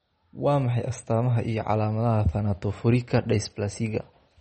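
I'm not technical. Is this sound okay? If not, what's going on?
No. The speech sounds watery and swirly throughout, with dull, muffled treble. That is MP3 compression, likely from squeezing the file too hard and discarding detail above about 8.3 kHz.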